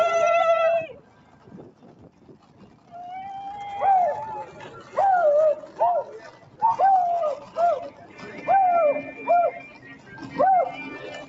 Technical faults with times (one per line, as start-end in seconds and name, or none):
0.00-11.28 noise suppressor applied to music or sounds
0.92-2.94 sound cut by the noise suppressor
4.49-4.94 sound cut by the noise suppressor
6.24-6.61 sound cut by the noise suppressor
7.42-7.57 sound cut by the noise suppressor
7.90-8.22 sound cut by the noise suppressor
9.64-10.34 sound cut by the noise suppressor